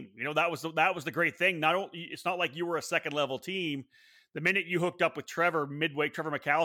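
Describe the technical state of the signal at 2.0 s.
At 2.0 s the speech signal is intact, with no audible dropout, distortion or other technical fault.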